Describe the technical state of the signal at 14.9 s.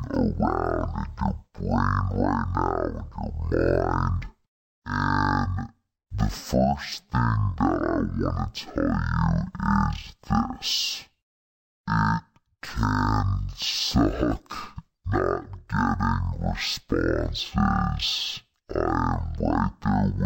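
At 14.9 s, as throughout the clip, stereo is read as mono: interleaved left and right samples run as one channel, so speech plays at half speed, an octave low.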